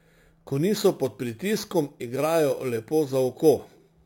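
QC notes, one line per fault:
Throughout, imaging from sample-and-hold upsampling: there's a bright, metallic fizz riding on the speech that rises and falls with it, sitting about 20 dB under the signal. Each sample was simply repeated to raise the rate, with no smoothing filter, so mirrored copies of the spectrum leak in. The lowest copy sits roughly between 5.5 kHz and 11 kHz, which fits source audio at about 11 kHz, and it slides opposite to the pitch.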